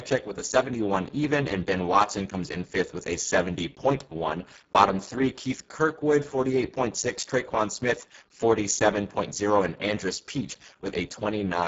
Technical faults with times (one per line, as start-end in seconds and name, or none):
0.00-11.68 Speex codec